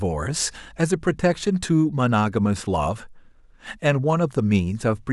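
From the start to 1.5 s, mains hum sits under the speech: a steady low tone at 50 Hz, roughly 30 dB below the talker, where power-line current has leaked into the signal path through a ground loop or a nearby transformer. It stops at 1.5 s. On a spectrogram it shows as a thin, unbroken horizontal line at 50 Hz that ends there. In the waveform it appears as a small, regular ripple beneath the speech envelope.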